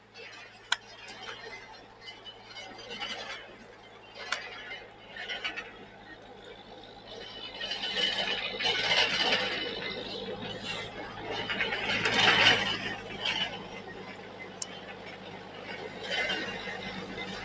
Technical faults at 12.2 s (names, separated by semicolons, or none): noise suppressor applied to music or sounds